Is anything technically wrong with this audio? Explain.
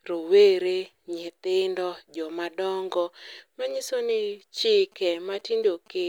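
Yes. From 4.92 to 6.03 s, near the end of the speech, GSM signalling bursts come through: a galloping dit-dit-dit of brief buzzes at about 217 Hz, sitting roughly 30 dB under the voice. A nearby 2G phone is sending its short signalling bursts, and the audio circuitry rectifies them into the audio.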